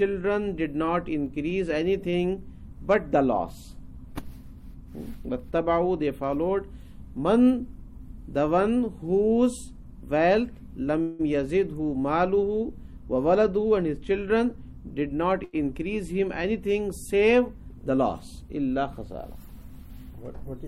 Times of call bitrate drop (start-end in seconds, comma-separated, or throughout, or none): none